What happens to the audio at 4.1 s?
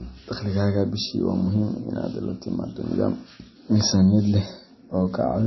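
At 4.1 s the speech carries the same damage heard across the whole clip, most likely MP3 compression. Nothing is present above about 5.8 kHz, so the treble is cut flat and s sounds lose their edge. With too few bits, the encoder drops weak frequency lines that flicker on and off between frames, giving a watery, swirling texture and smeared onsets. The degree of damage fits a bitrate near 24 kbps.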